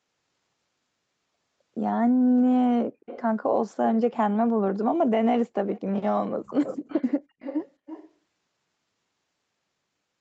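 Echo leak at 3.0–3.22 s, 5.7–5.81 s, 6.45–7.06 s and 7.39–8.1 s: a quieter delayed copy of the speech, roughly 10 to 20 dB down, trailing by 228 ms, then 325 ms. It is likely a far-end loudspeaker echo the echo canceller failed to remove.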